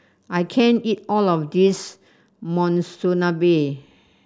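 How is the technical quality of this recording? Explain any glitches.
No technical faults can be heard anywhere in the recording, so there are no glitches to explain.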